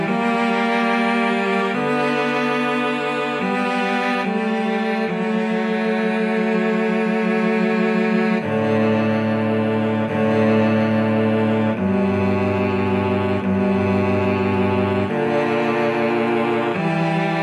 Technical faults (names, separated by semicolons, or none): none